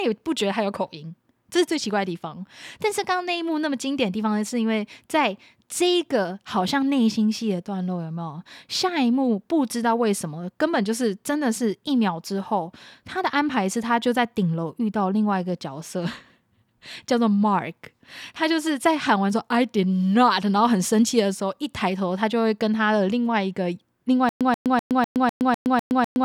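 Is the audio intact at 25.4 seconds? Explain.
No. From 24.29 s to the end of the clip the speech is caught in a stutter with silent gaps: the same 134 ms fragment repeats eight times, each followed by about 117 ms of digital silence, so it returns every 250 ms. The likely cause is a stalled player or stream replaying its last fragment on each retry and then running empty. Unlike a smooth loop or a plain dropout, it alternates an identical burst with dead silence, and the speech that should follow is lost.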